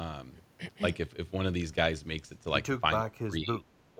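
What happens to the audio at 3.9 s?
From 3.94 s to the end of the clip, the speech drops sharply in level, by roughly 25 dB at its deepest, for the last few tens of milliseconds. The sound dips rather than fading naturally. This is speech suppressed in double talk, likely caused by an echo canceller that could not separate the near talker from loudspeaker echo while both sides spoke, and so attenuated everything together.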